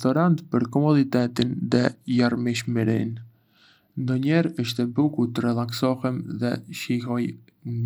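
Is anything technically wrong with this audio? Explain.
Yes. From 1.19 s to 5.01 s a Bluetooth SBC bit pool drop dulls the treble and adds gritty noise, consistent with the encoder falling to roughly 94 kbps on a congested link.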